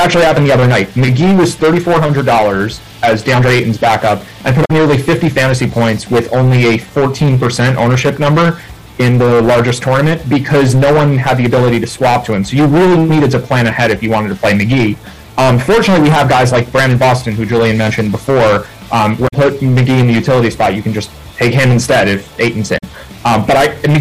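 Hard clipping runs through the whole clip: the signal is driven about 18 dB past what a stage in the chain can pass, so roughly a fifth of the samples hit the ceiling and are sliced flat. With overload this heavy, the squared-off peaks pile harmonics high into the spectrum, and every loud moment carries a harsh, buzzing fuzz rather than occasional crackle, leaving the sound dense and gritty from start to finish.

Damaged data in a compressed stream then breaks through four times, at 4.61 to 4.71 s, 11.97 to 12.01 s, 19.24 to 19.34 s and 22.74 to 22.84 s. At each point corrupted bytes make the decoder misread frames and lose sync until it finds the next valid header. The result is a brief chirp, squawk, click or short hole, about a tenth of a second long except the shorter blip near 12.0 s.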